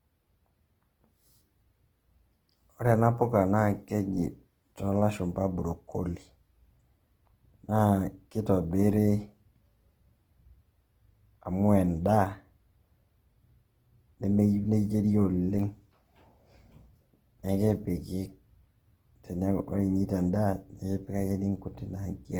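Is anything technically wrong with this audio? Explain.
Yes. Throughout the whole clip the speech carries plainly audible Opus compression damage, likely from encoding at a low rate; the grain points to Opus's music-style CELT mode at a bitrate around 16 kbps. With too few bits, the encoder keeps each band's energy but refills detail with folded copies of lower bands or noise, so the speech sounds rough and grainy rather than swirly. A spectrogram shows full bandwidth up to about 20.4 kHz, with smeared, noisy texture in the upper bands.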